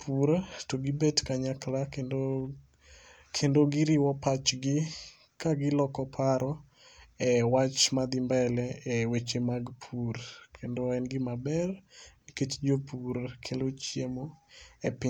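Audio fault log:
11.65 s, dropped samples: a handful of samples were likely skipped in the stream, so the waveform jumps abruptly between values, producing one brief, sharp click.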